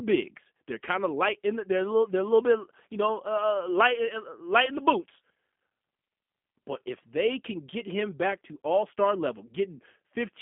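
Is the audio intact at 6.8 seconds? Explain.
No. At 6.8 seconds, as across the whole clip, the speech sounds slightly rough and synthetic, boxed into a narrow telephone band from about 150 Hz to 3.5 kHz with nothing above it. This is G.729 codec damage, at a low rate that fits 8 kbit/s. Each 10 ms frame is rebuilt from a vocal tract filter, a pitch predictor and a few pulses rather than the original waveform, which gives the buzzy, artificial texture.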